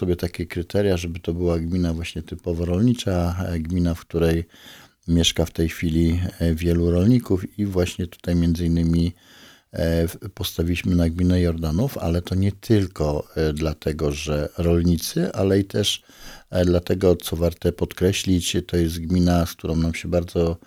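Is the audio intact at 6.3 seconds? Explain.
No. Chunks out of order at 6.29 s: one short block of audio, about 5.33 ms long, was delivered one chunk late, so it plays just after the block that should have followed it. Nothing is missing, but the swapped pair creates three abrupt joins within a span of about 11 ms. This is heard as a brief jumbled flicker. A chunk of this length would match a 256-sample buffer at 48 kHz.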